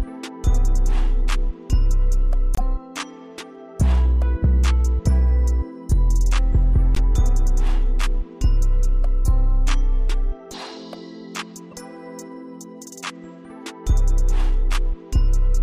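Damaged compressed frames were decoded anyway at 2.55–2.61, 6.95–6.98 and 11.71–11.74 s, a couple of frames each, giving brief misplaced noise bursts, the middle one loudest and the last faint.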